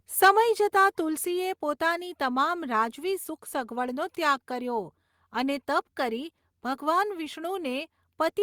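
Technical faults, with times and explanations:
1.26 s, microphone volume stepped down: the speech and its background fall together by about 4 dB in a single abrupt step and stay at the lower level. This is likely the call software cutting the device's input volume after judging the microphone too hot.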